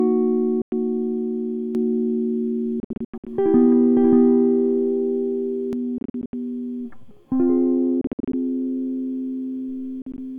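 At 0.62 to 0.72 s, packets likely failed to reach Bluetooth headphones in time, a Bluetooth dropout: the music cuts to silence for about 0.1 s and resumes further along, as if it had kept playing.

From 1.75 to 5.73 s, a doubled audio track appears, likely a second capture through a slower path mixed back in. A full-band copy trails about half a second behind at roughly equal level, with no reverb tail, starting and stopping abruptly.

Within that stretch, from 2.80 to 3.27 s, the dropouts return as scattered holes totalling about 0.3 s of lost music, the longest 87 ms. Similar choppy clusters follow at 5.98 to 6.33 s (0.2 s lost, longest gap 73 ms), 8.01 to 8.34 s (0.2 s lost, longest 58 ms) and 10.02 to 10.18 s (73 ms lost, longest 44 ms). Each gap cuts in with an abrupt edge or a fade of a few milliseconds and skips ahead.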